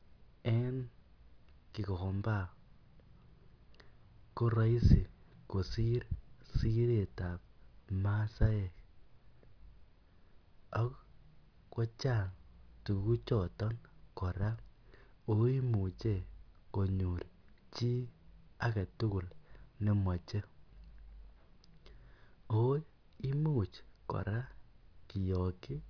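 A recording of speech whose signal shows no audible technical faults at any point.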